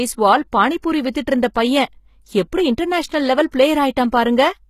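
The whole speech clip has that HE-AAC compression sound, and it's plainly audible. Nothing comes through above 14.9 kHz, and the treble feels rebuilt rather than real, with gritty, metallic s sounds. That points to spectral band replication at a low bitrate, likely around 20 kbps.

From 0.82 to 0.84 s, and again from 3.51 to 3.53 s, there's pre-echo: a short hiss of about 20 to 26 ms creeps in just ahead of a sharp attack. The codec spread its noise over the whole block, so noise fills the quiet moment before each attack and the attack itself sounds smeared and softened.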